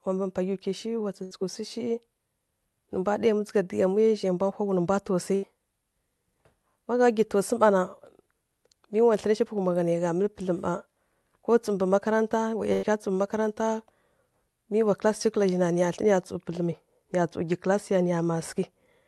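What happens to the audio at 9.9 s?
Nothing goes wrong at 9.9 s: the speech comes through intact, carried on the Opus call path with no dropout, glitch or distortion at that point.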